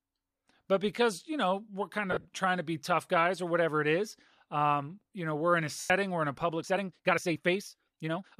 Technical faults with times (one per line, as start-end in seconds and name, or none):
2.12-2.28 lost LE Audio frames
5.80-5.90 lost LE Audio frames
6.59-8.40 time-stretched section